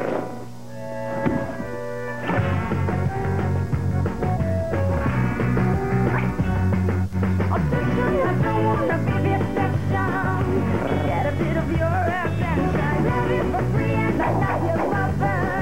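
The audio's zero line jumps by about -26 dBFS at 7.13 s, a DC step that then decays through a 20 Hz high-pass, heard as a single low thump.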